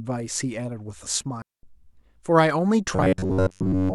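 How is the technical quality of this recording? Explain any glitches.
The recording has two clear faults, one in the middle and one at the end.

A digital wireless dropout runs from 1.42 to 1.63 s. The receiver lost too much data and muted for about 214 ms, leaving a clean hole of near silence with no noise burst. The waveform shows a flat gap, and the spectrogram a blank vertical band.

From 2.96 s to the end, the speech turns into a rigid, metallic buzz at 93.8 Hz. The likely cause is robotic sound from repeated short buffers: with audio arriving too seldom, roughly 10.7 ms segments are looped, which fits a buffer of that length, while most of the real audio is skipped. The spectrogram shows evenly spaced harmonic stripes, and the waveform repeats periodically.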